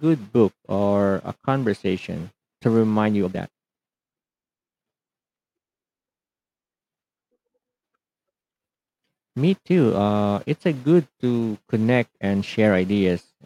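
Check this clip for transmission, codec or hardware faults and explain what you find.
One fault stands out in this speech clip. A time-stretched section runs from 2.99 to 4.83 s, where the audio plays about 1.83 times faster than the surrounding material while the pitch stays where it was. The likely cause is software squeezing that stretch to fit a shorter slot, holding pitch by discarding short slices of the waveform. The pace lurches forward abruptly at 2.99 s, sounding rushed until normal speed returns at 4.83 s.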